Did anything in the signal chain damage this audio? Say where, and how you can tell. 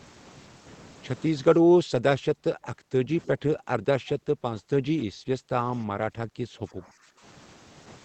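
Yes. The damage sits in the call-processing stage, as speech suppressed in double talk. From 1.42 s to 7.22 s the speech repeatedly dips and breaks up, about five seconds of it affected in all, with the deepest drops reaching roughly 25 dB. The likely cause is an echo canceller that, with both ends talking at once, could not tell the near talker from loudspeaker echo and attenuated everything it picked up.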